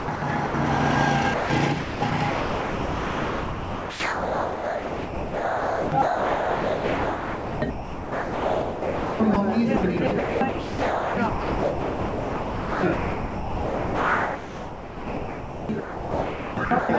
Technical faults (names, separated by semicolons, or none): sound chopped by the voice detector; sound dropped by the voice detector